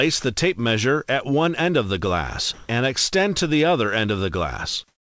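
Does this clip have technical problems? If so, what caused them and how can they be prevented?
Yes, two kinds of fault, both tied to how a call link handles quiet stretches.

Comfort noise in place of the background shows up from 2.54 to 2.69 s and again from 4.88 s to the very end at 5.02 s. In each gap, about 150 and 140 ms long, the real background gives way to a flat, featureless hiss whose level changes by about 9 dB. The background was already very low, about 49 and 59 dB under the loudest parts, so the sender's voice detector likely treated those moments as silence and stopped transmitting, leaving the receiver to synthesise filler. To prevent it, disable discontinuous transmission or make the detector less aggressive.

The onset clipped by the voice detector sits right at the end of the first gap, 2.67 to 2.69 s. About 20 ms of the returning sound is missing, so it begins abruptly with no soft attack, filled by comfort noise instead. 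This is likely the detector reacting a beat late when sound resumed. To prevent it, add lookahead to the voice detector so onsets are sent in full.

The call path itself tops out at 8 kHz, which fits a wideband codec such as G.722.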